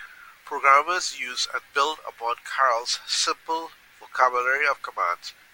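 Nothing goes wrong anywhere along the way here, so there are no technical faults to point to in this stretch of speech.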